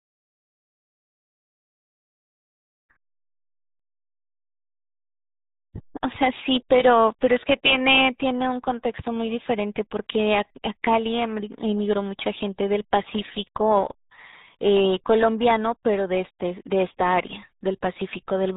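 From start to finish the speech has passed through the RealAudio 14.4 codec, the RealAudio 1 speech coder built for dial-up modems, and the damage is heavy. The coder squeezes the signal into a tiny data stream, consistent with about 8 kbit/s, discarding everything above 3.8 kHz and crudely modelling what remains. The result is muffled, boxy speech with a gargling, watery texture as the coarse model smears each syllable.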